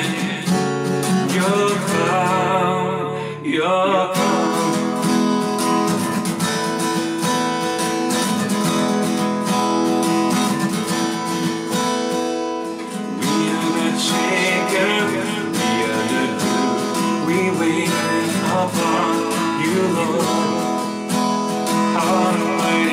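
Throughout, a doubled audio track is heard. A second full-band copy trails about 0.4 s behind, roughly 5 dB quieter, with no decay. It was likely captured again by a slower path.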